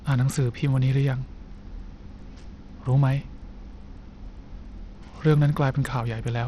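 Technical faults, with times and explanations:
Throughout, Bluetooth SBC compression: the speech was likely sent over a Bluetooth link on the SBC codec with a starved bit pool, which fits about 80 kbps. The top sub-bands get no bits, leaving nothing above 14.9 kHz, and coarse quantisation adds plainly audible grit.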